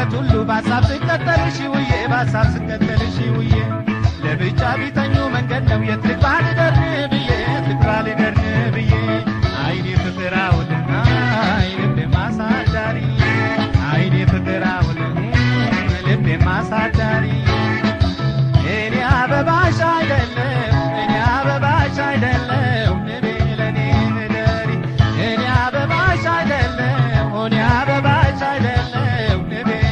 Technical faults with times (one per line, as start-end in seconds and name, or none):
none